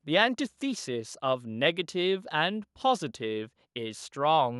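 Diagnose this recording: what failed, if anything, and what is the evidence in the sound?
No fault found anywhere.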